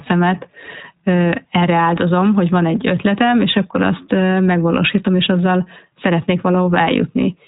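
From start to finish the speech sounds muffled and faintly rough and synthetic, with nothing above 4 kHz. That is iLBC codec damage. This narrowband VoIP codec codes each frame's excitation independently and discards the upper band, which fits its 15.2 kbps, 20 ms frame mode.

At 1.84 s a brief, slightly buzzy held sound replaces about 20 ms of audio, and the voice comes back almost immediately. This is a lost iLBC frame. The decoder filled the gap by repeating the last pitch cycle blended with noise, and because each frame decodes independently it recovered at the next one.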